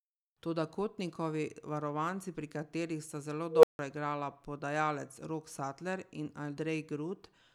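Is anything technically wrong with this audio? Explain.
Yes, there is an unstable filter from 3.48 to 3.79 s, just after "pri katerih sta zelo". A recursive filter's feedback runs away: a tone of about 500 Hz swells over 150 ms into clipping, then overflow mutes everything for 160 ms before "igrala podajalec". The waveform shows a ballooning, flat-topped envelope followed by a gap, and the spectrogram shows a bright narrow band then blank space.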